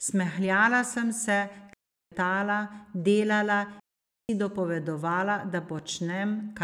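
Digital wireless dropouts occur twice: from 1.73 to 2.12 s, right after "sem se", and from 3.80 to 4.29 s, just before "dopovedovala da". In each case the radio link lost too much data for the receiver to rebuild the signal, so it muted with a very quick fade, leaving a clean hole of near silence lasting about 0.38 s and then 0.49 s. There is no crackle or noise burst at either edge.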